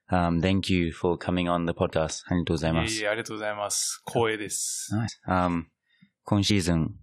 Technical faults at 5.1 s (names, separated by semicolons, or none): compressed frames skipped